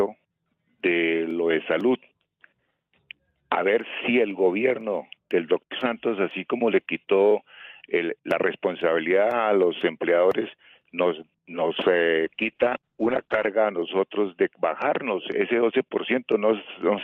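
From 12.26 s to the end, a call bitrate drop starves the encoder, which fits a fall from 32 to 8 kbps. The audio turns coarse and muffled as bandwidth shrinks from 20 kHz to 8 kHz. Unlike packet loss, nothing drops out; the dulling is continuous.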